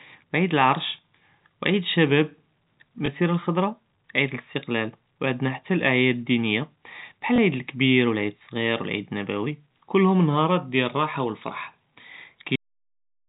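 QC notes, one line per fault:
3.06–3.08 s and 7.36–7.38 s, packet loss with last packet repeated: one 20 ms packet went missing each time, just before "אלחְדַרָה עִיד אלאסטִקלַל" and just after "אלעְיָד אלדִינִיָה בְּחַל". The previous 20 ms slice was replayed out of step with the pitch, so a small blip. The waveform shows a duplicated 20 ms segment, and the spectrogram shows thin vertical broadband lines at its edges.
12.56 s, cut-off end: the final buffers were never played, so the speech halts mid-sound and drops straight to digital silence until the end. The waveform becomes a dead flat line, and the spectrogram's energy, capped near 4 kHz by the telephone coding, ends in a sheer vertical edge with no decay tail.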